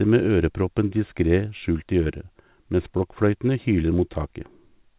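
Nothing is technically wrong with this speech clip.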